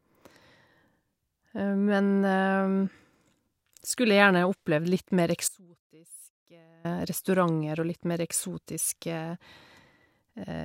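An audio dropout to a faint residue runs from 5.48 to 6.85 s, about 1.36 s: the speech cuts off abruptly and only a faint trace, roughly 25 dB down, remains. The wanted signal was likely lost while the path behind it stayed live.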